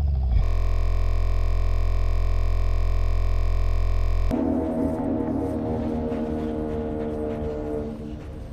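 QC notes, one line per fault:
0.44–4.31 s, system hang loop: the system froze while hardware kept replaying one 23.22 ms chunk, which fits a 1024-sample buffer, producing a steady 43.1 Hz buzz.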